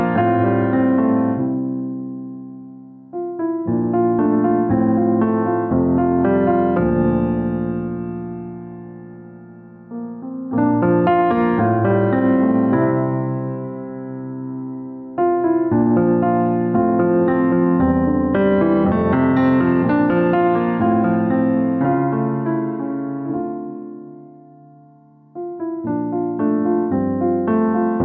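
Gain pumping runs throughout: the level ducks by around 5 dB under each loud sound, likely from input gain set far too high with a fast limiter pulling it down. Unlike a noise gate, pumping swells and ducks rather than cutting out.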